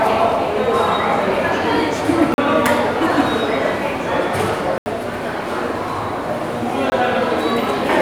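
Blocks of digital silence at 2.34–2.38 s (40 ms), 4.78–4.86 s (80 ms) and 6.90–6.92 s (20 ms): the sound drops abruptly to silence and returns with no fade, leaving short holes.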